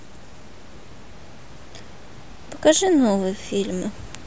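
No technical faults are audible.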